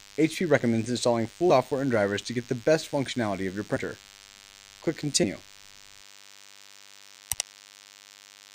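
From start to finish a DECT cordless phone buzz sits under the sound: a nearby handset or base station bursts every 10 ms, and the circuitry rectifies it into a thin 100 Hz buzz about 25 dB down. On a spectrogram it shows as evenly spaced horizontal harmonic lines stacked above 100 Hz.

Compressed frames are skipped at 1.49 s, 3.75 s and 5.23 s. Missing or rejected frames let the audio jump ahead, by roughly 150 ms at the first point and about 70 ms at the others. The jumps fit whole frames of about 21 ms. Each join shows as a discontinuity in the waveform.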